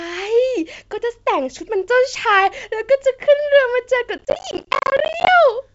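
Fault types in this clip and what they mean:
Processor overload crackle: from 4.18 to 5.28 s, dozens of roughly 10 ms buffers miss their deadline and drop to silence, crackling over the speech.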